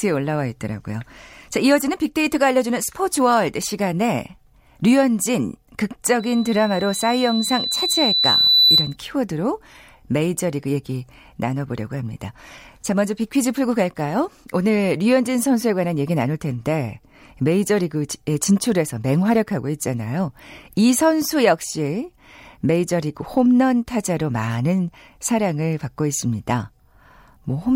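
From 6.19 s to 8.96 s there is loudspeaker feedback squeal. A microphone picks up the loudspeaker it feeds. At 4 kHz the loop gain climbs above one, so that frequency reinforces itself on each pass. It starts faint and swells over about three seconds. It becomes a piercing single tone that ends up a few decibels louder than the speech. It stops at 8.96 s.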